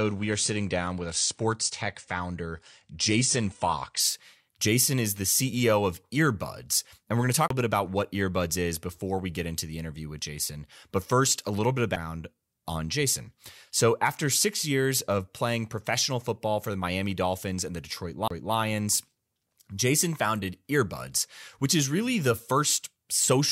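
Adaptive stream starting at a low bitrate, 0.0 to 4.0 s: the player opens on a lean version, with nothing above 9.8 kHz and heavier codec artefacts, which fits AAC at around 32 kbit/s. At 4.0 s the sound turns abruptly fuller, with no gap, consistent with a step up to about 96 kbit/s.

CD skips at 7.48 to 7.50 s, 11.96 s and 18.28 to 18.31 s: each time the laser jumps to another track turn, so there is a brief mute and playback resuming elsewhere. The first comes after "we're going to talk", with a mute of a few hundredths of a second before "bit about what". The second, after "a little bit of", is a mute of about 4 ms. The third, after "and the", is again a few hundredths of a second of silence.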